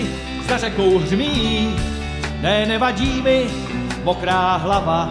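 Nothing stood out as a technical fault anywhere in this audio on listening.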